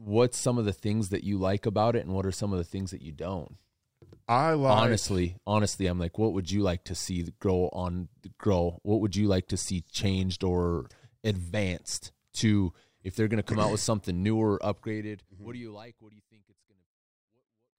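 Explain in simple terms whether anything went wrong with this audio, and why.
Nothing went wrong with this audio, since the gentle fade-out of the speech from about 14.5 seconds is a deliberate smooth fade rather than a fault.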